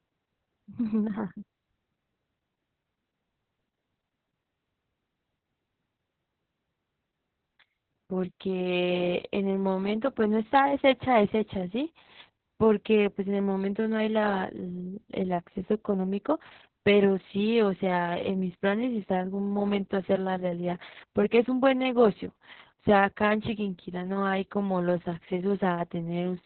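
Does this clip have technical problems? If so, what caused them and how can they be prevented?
Yes. Opus voice compression runs throughout the speech, which sounds muffled, hoarse and slightly robotic. The SILK speech coder keeps only a narrow band and codes the excitation coarsely, which fits a bitrate around 6 kbps. A spectrogram shows nothing above 4.2 kHz. Encoding at a higher bitrate, so Opus keeps a wider band and finer excitation, would prevent this.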